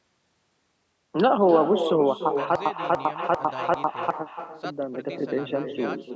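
From the start, every phrase is followed by a fainter copy, arriving around 300 ms later and about 9 dB down. It sounds thinner than the direct speech. This is echo with no canceller. The far end is playing the call through a loudspeaker. Its microphone captures that playback and sends it back over the network. Nothing strips it out, so the speech returns after the round trip, shadowing itself throughout.

From 2.55 s to 4.1 s, a stutter with silent gaps takes over. A fragment about 295 ms long plays, then 100 ms of dead digital silence follows. The cycle repeats four times at a steady pace of roughly 395 ms. The likely cause is a stalled player or stream. On each retry it replayed its last chunk and then ran dry. The speech that belonged in that span never plays. The band tops out at 8 kHz, as call microphone processing gives.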